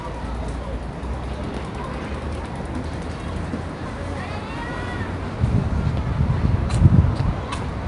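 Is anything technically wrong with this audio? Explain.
Yes. Throughout the clip, a gritty hiss rides on every loud passage, rising and falling with the level, and sharp attacks sound roughened. The top end is dull, with nothing above about 10.6 kHz. This is 4-bit ADPCM compression. Each sample is coded as a coarse 4-bit step from a prediction, so the error becomes level-following broadband noise, and sudden transients outrun the adapting step size. The bandwidth and grain fit a rate of around 88 kbps.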